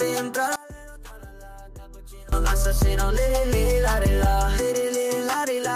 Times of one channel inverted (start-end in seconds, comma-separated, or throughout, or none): 0.56-2.32